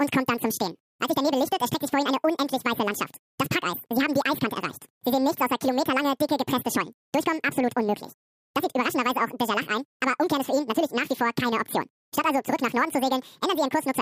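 Throughout, the audio is read two samples at a time, so the speech runs at double speed and an octave higher. Spectrogram harmonics sit twice as far apart, and waveform cycles are half as long.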